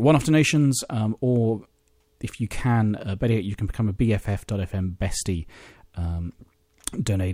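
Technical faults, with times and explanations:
There are no technical faults in this clip.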